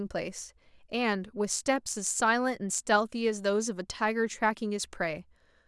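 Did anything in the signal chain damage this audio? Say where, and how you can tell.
No, nothing in the signal chain damaged this audio, so there is no stage to point to.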